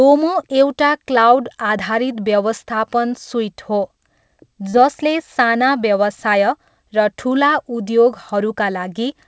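At about 4.70 s, roughly 30 ms of the call's audio failed to reach the decoder in time, a short concealed packet loss. The receiver covered the gap by extending the preceding sound for about 32 ms, then trimmed around 12 ms while merging back into the real signal by 4.78 s. The result is a brief smeared wobble where the original detail drops out, heard through a call path with nothing above 8 kHz, consistent with G.722 at 64 kbps.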